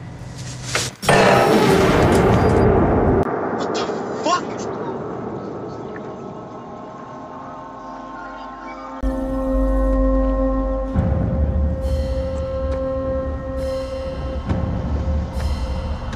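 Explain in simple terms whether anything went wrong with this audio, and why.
Between 3.23 and 9.03 seconds the sound changes character: everything above about 7.6 kHz disappears, the level drops somewhat, a new background noise appears, and a short gap of about 20 ms marks the changeover. This is likely an input switched to a poorer device. An equaliser or filter would only dull the tone, but here the change starts and ends abruptly and brings its own quieter level and its own noise, as a different microphone would.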